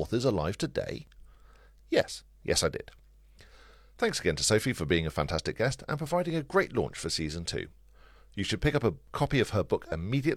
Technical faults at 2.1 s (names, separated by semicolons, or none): overlap between stream segments